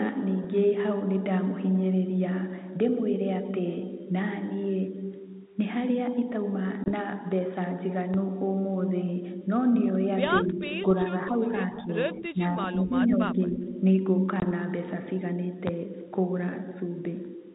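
At 6.84 to 6.89 s and again at 14.40 to 14.44 s, the call shows packet loss on an ADPCM call. A 20 ms stretch, which fits a single lost packet, is replaced by silence. The G.726 decoder's predictor and step size then drift from the sender's, so after each hard-edged gap the audio resumes slightly distorted before settling. The codec runs at 32 kbit/s, with nothing above 4 kHz.

At 8.14 to 8.17 s, a loud pop peaks about 10 dB over the speech, likely from a sudden voltage step such as a switch or driver glitch. A single sharp thump sits on top while the speech continues underneath. A second pop, about 15 dB up, lands at 15.67 to 15.71 s.

Between 10.44 and 13.67 s, speech is suppressed in double talk at 10.44 to 10.65, 11.29 to 11.43, 11.76 to 11.91, 12.14 to 12.99 and 13.18 to 13.67 s. This is likely an echo canceller unable to separate the talker from loudspeaker echo, so it pulls the level down. 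The voice dips by about 5 dB, reaching about 10 dB around 12.14 to 12.99 s.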